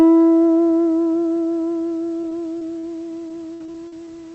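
Everyday sound over a call link, with repeated packet loss (robotic sound) from 2.21 to 2.85 s and 3.29 to 4.09 s: short holes up to 60 ms get patched with repeated sound, so it turns choppy with pieces missing.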